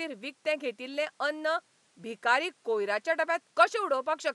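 Nothing stood out on listening to this speech; the only thing beyond the talking is the room's own background noise, sitting about 39 dB below it.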